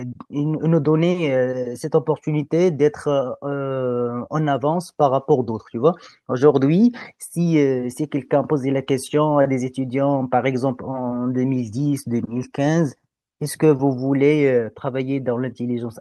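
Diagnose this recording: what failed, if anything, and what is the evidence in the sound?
Nothing failed here as far as I can hear: the speech holds steady the whole way, with nothing in the sound pointing to trouble at any stage of the chain.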